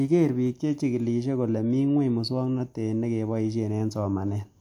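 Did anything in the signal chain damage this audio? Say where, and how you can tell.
No, nothing in the signal chain audibly damaged this audio.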